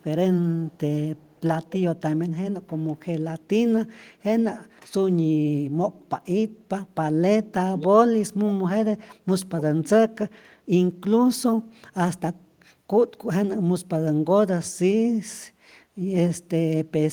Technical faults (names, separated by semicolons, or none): echo leak; speech suppressed in double talk